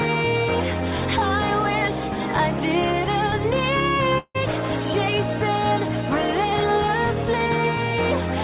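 At 4.18 s the sound breaks off until 4.36 s, likely a long network dropout. The receiver carries the last sound on as a buzz that fades over about 0.16 s, then leaves about 50 ms of near silence, and the audio returns with about 0.16 s of material missing. The fading fill and the skipped content set it apart from a brief packet loss, which is patched without a gap. They also set it apart from a mute, which drops straight to silence and loses nothing. Throughout, the sound stops at 4 kHz, as expected of the G.711 mu-law call path.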